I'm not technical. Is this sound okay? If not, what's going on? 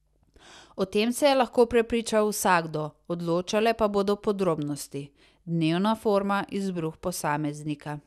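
Yes, this speech recording sounds fine, with nothing going wrong anywhere in it.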